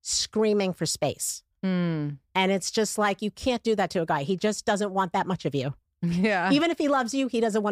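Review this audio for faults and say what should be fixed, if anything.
No faults; nothing needs fixing.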